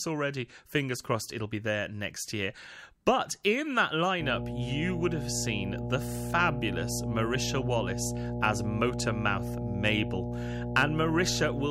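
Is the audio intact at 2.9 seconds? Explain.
Yes, the speech runs cleanly through 2.9 seconds with no dropout, click, distortion or other audible fault at that moment.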